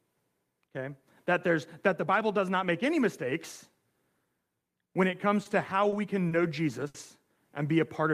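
Short stalls from late packets occur four times in this speech: 5.43 to 5.48 s after "when it comes", 5.89 to 5.95 s before "can know", 6.28 to 6.34 s, and 6.87 to 6.97 s after "can know". Each time the jitter buffer ran dry, and the receiver held the last sound for 20, 30, 30 and then 70 ms until the packet arrived. Nothing is lost, but sounds drag with a faint buzz or dip.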